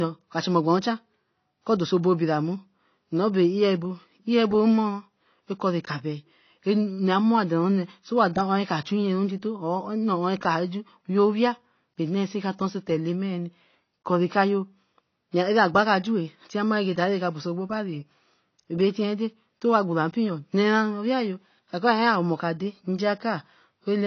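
From start to finish the speech sounds dull and boxed in, with nothing at all above about 6.6 kHz, and there's a watery, swirling smear on sustained vowels and a fizzy edge on the sibilants. That's the classic signature of AAC compression, likely AAC-LC squeezed down to a low bitrate, something in the region of 24 kbps. At that rate the encoder drops the top of the spectrum entirely and starves the remaining bands of bits, which causes the warble.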